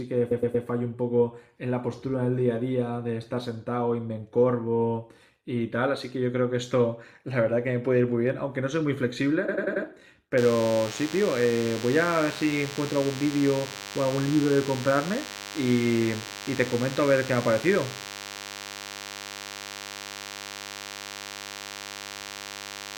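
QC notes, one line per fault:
0.30–0.65 s and 9.48–9.85 s, repeated frames. A short block of coded audio plays again and again, so the speech stutters. The first block is 116 ms and repeats three extra times. The second is 93 ms and repeats four extra times. Each block fits a run of four or five frames. Together the repeats add about 0.72 s to the clip.
10.38 s to end, DECT cordless phone buzz. A thin, steady buzz sits under the speech at roughly 15 dB below it. A nearby DECT handset or base sends a radio burst every 10 ms. The audio circuit rectifies the bursts into a 100 Hz buzz with many harmonics.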